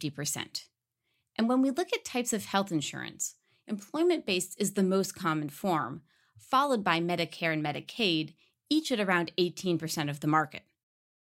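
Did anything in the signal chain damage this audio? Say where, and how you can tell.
No, nothing in the signal chain audibly damaged this speech recording. No stage, from capture through playback, leaves a mark that can be heard anywhere in it.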